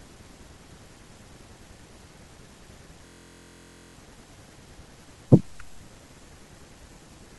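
A speech clip with a system hang loop from 3.07 to 3.95 s. The sound freezes on one 23.2 ms piece, which fits a 1024-sample buffer, repeated 38 times. At 43.1 Hz it becomes a steady buzz. Speech then resumes with essentially nothing missing.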